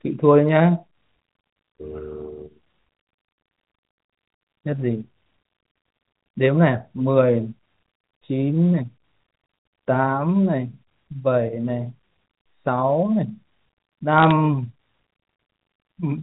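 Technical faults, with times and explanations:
14.18–14.31 s, bit errors on a digital phone line: a short burst of sharp ticks and crackle as flipped bits corrupt individual samples on the G.711 line.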